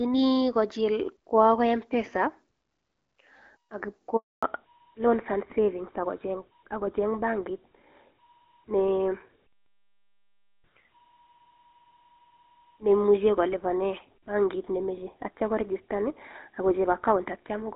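At 4.17 s the speech drops out in a handover gap. The call switched networks, and no speech frames arrived during the move. The sound fades within tens of milliseconds, then stays silent for 260 ms, until 4.43 s. Anything said then is lost.

From 4.43 s to the end, there is a fallback to narrowband. The clear HD Voice sound, which fits AMR-WB at about 12.65 kbit/s, gives way to an older narrowband codec, likely GSM full rate. Nothing above 4 kHz remains. The speech turns duller and rougher.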